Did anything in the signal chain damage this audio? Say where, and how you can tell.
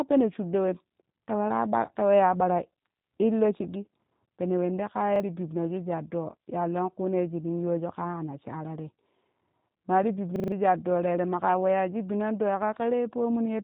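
Yes. At the codec stage the speech went through G.729 (the G.729A variant) at 8 kbit/s. The codec throws away the waveform and resends only a vocal-tract filter, a pitch predictor and a few pulses per frame, so the decoder rebuilds an approximation. Across the whole clip nothing survives above 3.8 kHz, and the speech has a plainly audible rough, buzzy, synthetic edge where natural detail has been replaced by the model.

At the driver or buffer stage there are two repeated buffers, where playback ran dry and the last block of audio was played again. At 5.16 to 5.20 s one short slice sounds twice with a hard join, a brief stutter. At 10.36 to 10.52 s, right after "ma ti", the same slice loops four extra times, a longer stutter that covers about 150 ms of missing audio. The repeat length suggests a 40 ms buffer.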